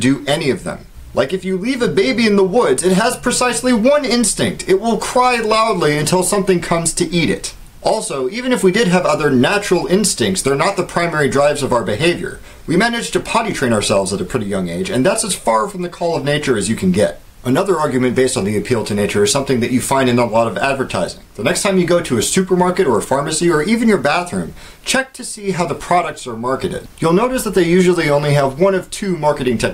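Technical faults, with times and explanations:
Nothing technical jumps out here; the audio runs along without any faults to point to.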